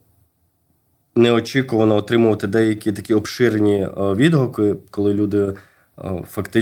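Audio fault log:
No technical faults can be heard anywhere in the speech recording; the signal stays continuous and stable throughout.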